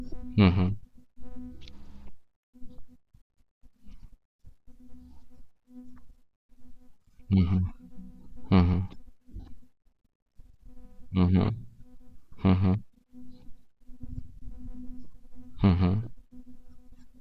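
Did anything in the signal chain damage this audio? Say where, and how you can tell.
Yes, at the Bluetooth link: lost LE Audio frames. At 5.38 s the speech briefly turns to a grainy smear, a gap of about 15 ms that fits two 7.5 ms frames. From 9.31 to 9.45 s about 105 ms go missing in bursts, the longest roughly 50 ms. The decoder filled the holes by repeating the last spectrum with scrambled phase, then fading it. On a spectrogram, harmonics blur into flat noisy columns. On the waveform, the envelope sags.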